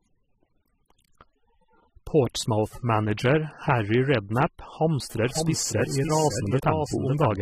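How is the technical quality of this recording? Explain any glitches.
The recording has two audible problems, one running through the whole clip and one appearing near the end.

Throughout, the speech carries layered smearing and swishy artefacts with nothing above 15.2 kHz, likely from transcoding between lossy codecs, AAC then MP3, each stacking its own damage.

From 5.16 s to the end, a second copy of the speech trails about half a second behind, some 5 dB quieter, dry and starting abruptly: a doubled audio track, likely from a delayed path mixed in.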